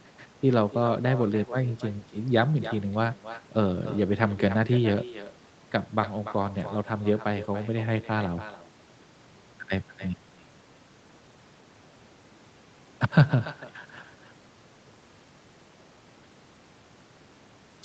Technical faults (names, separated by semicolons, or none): echo with no canceller